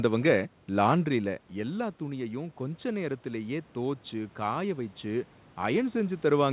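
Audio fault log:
1.13–6.25 s, automatic gain rising: after the level drops about 11 dB near 1 s as the talker moves back, the gain control climbs about 7 dB over five seconds. Voice and room noise swell together, unlike a talker coming closer, where only the voice grows.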